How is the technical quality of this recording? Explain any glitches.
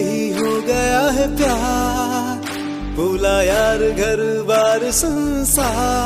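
One glitch affects the recording: a short concealed packet loss between 5.13 and 5.17 s. About 20 ms of the stream failed to reach the decoder in time, and the receiver covered the gap by extending the last stretch of audio, roughly 21 ms of it, before blending back into the real signal. The result is a brief smeared wobble, and any very short sound in that instant may be lost.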